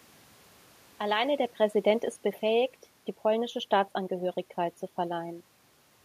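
Automatic gain falling, 1.01 to 3.55 s: the gain control judged the input too loud or its background noise too strong and eased its level down by about 5 dB, so voice and room noise sink together.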